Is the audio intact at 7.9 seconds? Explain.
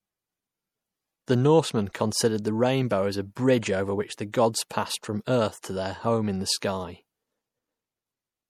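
No. At 7.9 s, as across the whole clip, the speech carries plainly audible damage, likely from MP3 compression at a low bitrate around 64 kbps: watery swirling, and smeared, chirpy s sounds.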